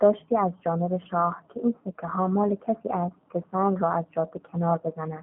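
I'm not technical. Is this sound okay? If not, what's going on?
No. The speech sounds thin, slightly rough and robotic all the way through, like a cheap internet phone call. That's the G.729 codec, which rebuilds the voice cheaply and drops everything high-pitched.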